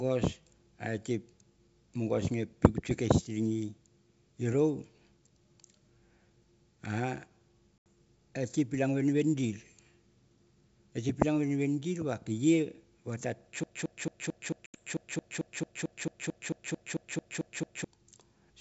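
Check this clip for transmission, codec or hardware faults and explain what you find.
Yes, two kinds of transmission fault are audible: two brief dropouts from packet loss on an ADPCM call, and a long broken-record loop. The wideband G.722 coding itself keeps the speech clear up to about 7 kHz.

Packet loss on an ADPCM call occurs at 7.78–7.86 s and again at 14.66–14.82 s. Each gap is an 80 ms hard-edged silence, which fits a few lost packets. ADPCM transmits only differences, so the receiver's predictor and step size drift away from the sender's during the gap. The speech then resumes with slight distortion that settles within tens of milliseconds. That abrupt silence followed by a rough restart sets it apart from a loop.

The broken-record loop runs from 13.64 to 17.84 s. A 222 ms fragment repeats exactly 19 times, back to back, and the speech that belonged in those four seconds never arrives. 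The likely cause is a player or stream that stalled and kept resending the last buffer it held. Unlike a dropout, nothing goes silent: the identical fragment recurs about four and a half times a second with the same timing every cycle. The second packet loss, at 14.66 s, falls inside this loop.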